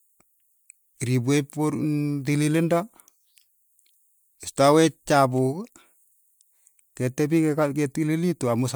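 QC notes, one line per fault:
No faults detected.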